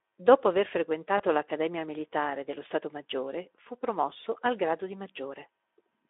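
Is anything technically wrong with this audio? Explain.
Yes. There is a short dropout from 1.17 to 1.22 s, heard through the Speex codec's narrow 300 Hz to 3.5 kHz line band and its light coding roughness. This is VoIP packet loss concealed by the speech codec. About 20 ms of signal is missing, which fits a single lost frame. The decoder filled the gap by repeating its last pitch and spectral shape at falling gain, so the sound smears into a fading tone before normal audio resumes. Because each decoded frame depends on the one before, the sound stays weak just after the gap. On a spectrogram, the harmonics flatten into steady horizontal lines with no natural movement and then fade out. On the waveform, the amplitude dips over those few tens of milliseconds and then recovers.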